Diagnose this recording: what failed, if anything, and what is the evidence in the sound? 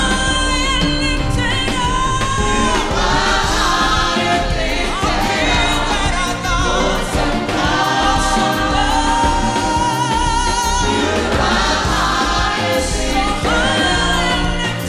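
Nothing in the signal points to a failure at any stage, from the analogue side through conversion, buffering, processing and playback, with no dropouts, level jumps or discontinuities to be heard anywhere in the recording.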